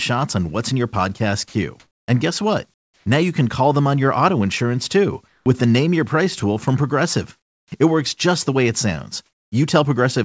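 Around 1.48 to 1.54 s a bit of speech simply vanishes, about 50 ms of it, and a flat hiss sits in the gap. That's sound dropped by the voice detector: it likely mistook a soft bit for background and stopped sending, leaving the receiver to fill in.

The pauses show comfort noise in place of the background. At 1.80 to 2.08 s the room tone turns into smooth, featureless noise, about 6 dB louder than the real thing. The same swap happens at 2.74 to 3.06 s, about 8 dB quieter; 5.28 to 5.46 s, about 6 dB down; 7.38 to 7.72 s, about 11 dB down; and 9.26 to 9.52 s, about 6 dB down. That steady, detail-free hiss is most likely synthetic fill generated while the sender wasn't transmitting.

At the end of that 7.38 s stretch, from 7.66 to 7.72 s, there's an onset clipped by the voice detector. The next sound arrives abruptly, missing its first 60 ms, because the detector was likely slow to notice it starting again.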